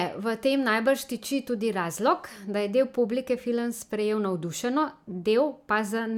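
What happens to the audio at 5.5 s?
Nothing goes wrong at 5.5 s: the speech there plays through intact, with no dropout, click, distortion or other fault.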